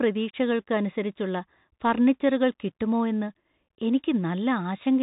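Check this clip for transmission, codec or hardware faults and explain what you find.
One codec fault runs throughout the speech. A Bluetooth CVSD headset codec, consistent with a 64 kbps stream, encodes one up-or-down bit per sample and cuts everything above 4 kHz, leaving muffled, scratchy sibilants and granular hiss.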